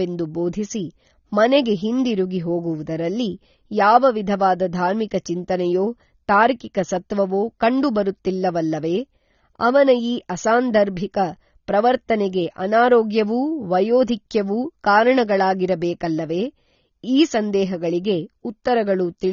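From start to finish the speech is dull and smeared, with nothing above 7 kHz, and sibilants and held vowels carry a fizzy, warbling texture. That points to AAC compression, likely AAC-LC at a low rate, which fits a bitrate around 24 kbps. The encoder has dropped the top band and starved the rest of bits. A simple low-pass filter would also dull the sound, but it would leave the remaining band clean instead of swirling and smeared.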